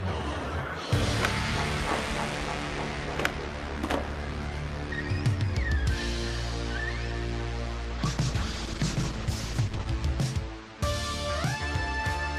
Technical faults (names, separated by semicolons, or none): call bitrate drop